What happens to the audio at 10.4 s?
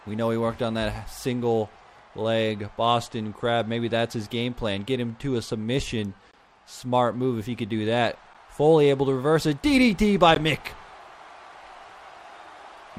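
At 10.35 s there is a gap between stream segments: the timestamps of two consecutive segments fail to meet, and the player fills the 15 ms hole with silence. It sounds like a brief hard dropout, and a waveform or spectrogram shows a sharp-edged, empty vertical strip with nothing missing on either side.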